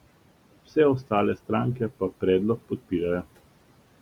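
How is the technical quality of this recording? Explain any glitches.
The speech carries noise-suppressor processing for its whole length. Noise suppressor artifacts run throughout: the suppressor estimates the steady background, here room noise sitting about 18 dB below the speech, and cuts those bands by about 18 dB frame by frame. The noise therefore dips between phrases and swells back under speech.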